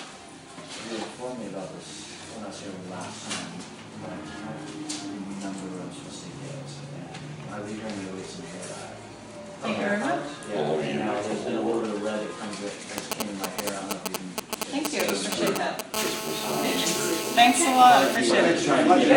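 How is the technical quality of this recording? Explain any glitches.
The recording has two stretches of interference from a nearby 2G mobile phone.

From 12.98 to 15.96 s there are GSM signalling bursts. The phone sends short clusters of radio bursts while it handshakes with the network. The audio circuit rectifies them. The result is a galloping dit-dit-dit of brief 217 Hz buzzes, roughly as loud as the sound itself.

From 15.96 to 18.17 s a continuous GSM phone buzz follows, as the phone holds a call. It transmits bursts 217 times a second, and the circuit demodulates those pulses. This gives a hard, raspy 217 Hz buzz rich in harmonics, about 6 dB below the sound.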